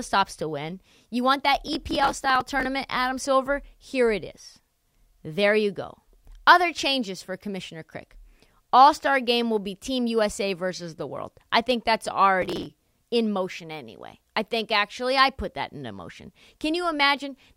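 Processor overload crackle appears from 1.55 to 2.65 s and again, more briefly, from 12.42 to 12.66 s. In both stretches the processor falls behind and misses dozens of very short buffer deadlines again and again, each lasting only a millisecond or two. Each missed slice is simply skipped, leaving a tiny hard-edged hole, so the speech picks up a gritty, tearing crackle that clears as soon as the load eases.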